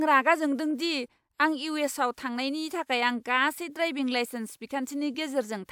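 No technical faults can be heard anywhere in this speech recording.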